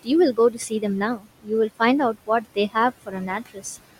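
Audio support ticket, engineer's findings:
Noise suppressor artifacts, whole clip: room noise, about 17 dB under speech, ducked by about 17 dB between phrases and rising under them. Gating pumps with speech rather than staying constant.

Speech cut by the noise suppressor at 0.33–0.84, 1.15–1.51, 2.13–2.76 and 3.06–3.63 s: only brief stretches within each window, about 0.15 to 0.3 s, sound swallowed. Drops of about 14 to 19 dB leave speech faint, not silent as in a dropout.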